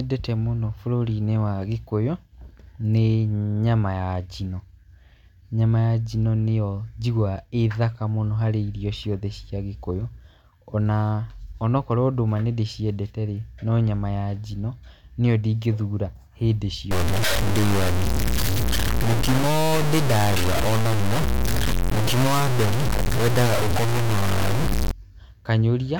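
From 16.91 s to 24.91 s, right after "njino nĩyo ndingĩthura hĩndĩ", the speech turns harsh and grainy, with distortion roughly as loud as the speech itself that shifts with every syllable, and quieter stretches sputter or cut to silence. This is low bit depth without dither, likely a truncation to about 3 bits. The waveform shows coarse stair-steps and flat near-silent runs, and the spectrogram shows broadband hash tracking the speech energy.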